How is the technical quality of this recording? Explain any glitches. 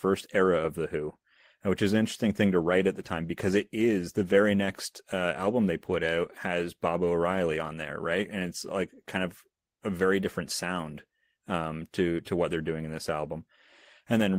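No technical glitches can be heard anywhere in the recording, and the signal stays continuous and steady throughout.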